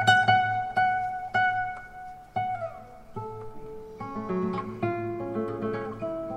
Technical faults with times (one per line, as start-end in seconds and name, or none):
none